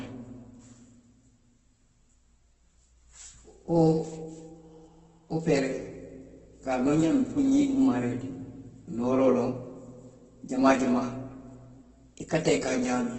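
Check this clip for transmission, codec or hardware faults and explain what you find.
Opus compression runs throughout the speech, and it is the one fault present. The sound is likely from Opus in its music (CELT) mode at a very low rate, which fits a bitrate near 12 kbps. Starved of bits, the encoder keeps each band's overall energy but fills the detail with folded copies of lower bands or noise, giving heavy damage: grainy, rough, hissy texture on voiced sounds. The band stops at about 8.1 kHz, a wideband limit that dulls the top.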